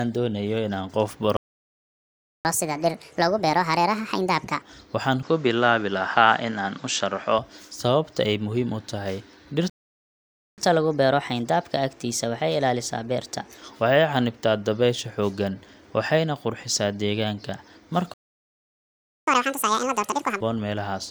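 Just after "doonayo inaan qof" the speech drops out completely from 1.37 to 2.45 s, a playback stall of about 1.08 s. That gap most likely comes from the player running dry or its thread getting blocked. It picks up where it left off, then goes straight into catch-up at higher speed from 2.45 to 4.62 s. Playback runs at 1.5x to claw back the lost time, so the pitch jumps about seven semitones and the voice sounds chipmunky until it settles back to normal.

Shortly after that, from 5.23 to 7.39 s, the input switched to a poorer device, likely a change of mic or a headset call profile mid-recording. There's no gap at the switch and no level jump. The tone just goes dull because the device passes a narrower band, and a new layer of background noise sits around 30 dB under the speech. It clears up again right before "sababta ay muhiim u".

After "ay muhiim u tahay" there's a second stall from 9.70 to 10.58 s, about 0.88 s of silence. 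The catch-up that follows, from 10.58 to 13.58 s, is gentler at 1.15x, so it's only about two semitones sharp. The third stall runs from 18.14 to 19.27 s, roughly 1.14 s. The worst catch-up comes after it, from 19.27 to 20.41 s at double speed, with the pitch up about ten semitones.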